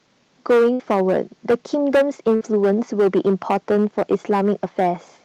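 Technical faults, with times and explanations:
Throughout: hard clipping. The speech is driven about 12 dB past what a stage can pass, so a small fraction of samples, around 7 percent, have their peaks sliced flat. That adds high harmonics, giving a harsh fuzz on every loud syllable, unlike a gap's hold-and-fade.
0.73–0.82 s and 2.35–2.44 s: burst of packet loss. Roughly 60 ms of audio goes missing each time; the receiver stretches the last sound across about 55 to 60 ms, fading it as a held buzz or hiss, then resumes later, skipping content rather than distorting peaks.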